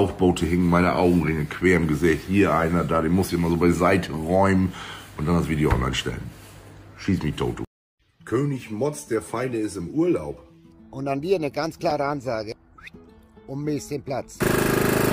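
Nothing technically wrong turns up anywhere in this audio, so there's no fault to time or trace back to a cause.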